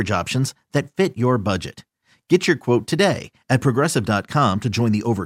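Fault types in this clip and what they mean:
No technical faults can be heard anywhere in the speech, and the signal holds together as one continuous, undisturbed recording.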